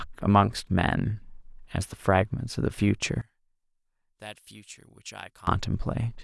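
From 3.21 to 5.47 s the speech drops by about 23 dB to a faint residue, likely one channel inverted and summed to mono. Unlike a dropout, it doesn't go silent; unlike a gain dip, what both channels shared cancels while only their small mismatch remains.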